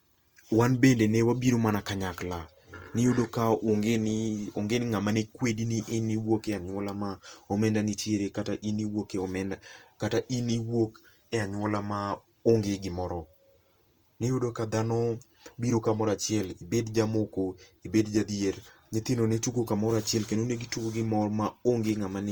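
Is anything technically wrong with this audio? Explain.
Yes. Throughout the speech, the audio shows Opus compression, most likely from an encoder running short of bits. The damage sounds like what the codec's music (CELT) mode does at a bitrate around 24 kbps: band energies hold, but their fine detail is rebuilt from folded lower bands or noise. The bandwidth stays full, reaching about 20.2 kHz, yet the tonal parts of the speech turn plainly rough, grainy and noisy rather than swirly.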